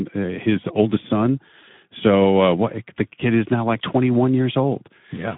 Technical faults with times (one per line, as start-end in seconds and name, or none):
0.00-5.38 Speex codec